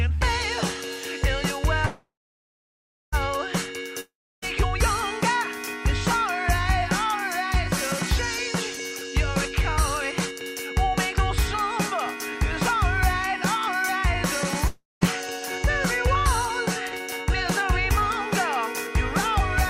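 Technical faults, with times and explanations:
1.85 to 3.15 s, call audio freeze: packets were likely held up in transit, draining the jitter buffer. The last sound is stretched into a fading buzz, then about 1.04 s of silence. Playback resumes where it stopped, so nothing is lost but everything after runs 1.27 s later.
4.01 to 4.44 s and 14.67 to 15.03 s, long network dropout: audio likely never arrived. The receiver extends the final sound as a decaying buzz, followed by silence of 0.31 s and 0.18 s. The sound then returns further on, skipping about 0.42 s and 0.36 s.
10.12 to 13.76 s, jitter buffer speed-up: the buffer held more audio than its target, so the receiver repeatedly cut tiny pitch-period slices to shrink the delay. The sound plays at 103% speed with unchanged pitch, dropping roughly a tenth of a second overall.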